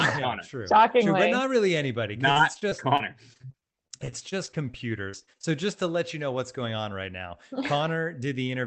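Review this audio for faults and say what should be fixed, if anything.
Repeated packet loss (robotic sound) runs from 2.31 s, just after "but not really anybody", to 5.45 s, just before "just to let you". Twenty-seven short holes, the longest around 43 ms, break up the speech. Each is covered by stretching the last received sound, adding up to roughly 0.6 s, about a fifth of that span. Speech in this span turns choppy, with fragments missing, while the 8 kHz upper limit from the call codec stays steady throughout. To prevent it, stabilise the network path and enable forward error correction with a jitter buffer deep enough to absorb late packets.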